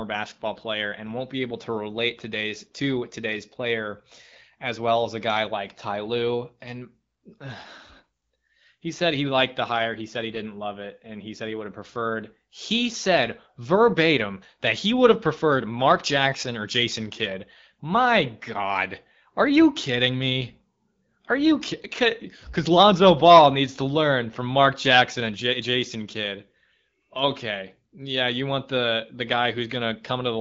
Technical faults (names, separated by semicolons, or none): none